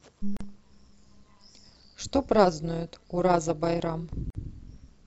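All the way through the speech there's overlap-add ripple: frames rejoined with a mismatched overlap, so the level pumps by about 11 dB at roughly 200 Hz, giving a metallic buzz with extra tones around the voice. Then there are two gaps at a join of encoded pieces, at 0.37 s lasting 39 ms and at 4.30 s lasting 47 ms. Separately encoded chunks were spliced with their padding left in, so the sound drops to silence with smeared edges and then carries on.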